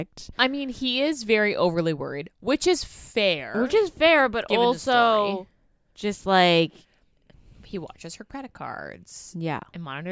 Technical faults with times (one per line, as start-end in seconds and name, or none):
none